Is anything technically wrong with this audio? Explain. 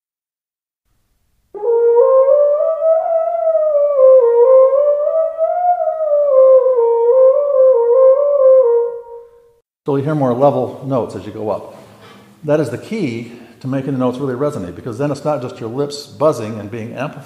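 No, the signal shows no technical faults anywhere in the recording.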